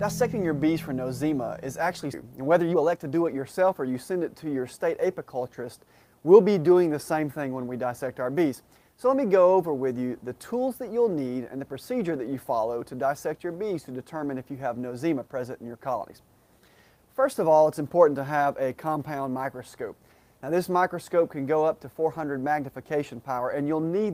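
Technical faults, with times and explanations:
2.13–2.15 s, skip ahead: Playback jumps forward with no gap at all, and roughly a second of sound is missing. That stretch was dropped, in transit or by an overflowing jitter buffer, while later audio was already queued, so the two sides of the missing stretch butt together almost directly.
2.22–4.24 s, jitter buffer speed-up: The sound runs at about 113% of normal speed with its pitch unchanged, so this stretch feels hurried. The receiver held more audio than its target and trimmed many short pitch-period slices in a row, removing roughly a third of a second to cut the delay.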